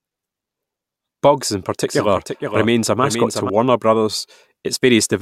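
A doubled audio track runs from 1.86 to 3.50 s: a full-band copy about half a second late and about 5 dB quieter, starting and stopping abruptly, likely from a second capture path.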